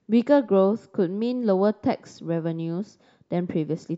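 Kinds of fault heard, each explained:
No faults are audible anywhere in this speech recording.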